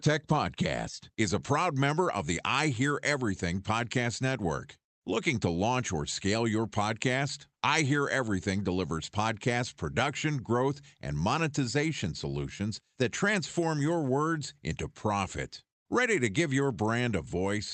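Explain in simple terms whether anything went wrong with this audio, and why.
Listening to this speech recording, which came through an ordinary internet call connection, nothing stood out as having gone wrong.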